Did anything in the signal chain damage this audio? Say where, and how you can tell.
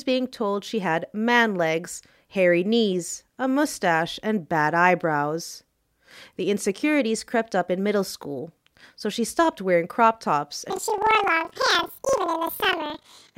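Yes: planar audio read as interleaved in sample-format conversion. From 10.7 s, after "stopped wearing crop tops", the speech jumps an octave with 23.4 Hz flutter from double-speed block replay.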